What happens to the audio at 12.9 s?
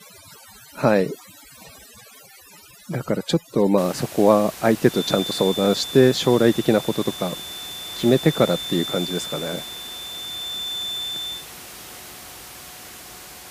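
Nothing goes wrong at 12.9 s; the speech there is intact, with only the room's own background noise sitting about 17 dB below it.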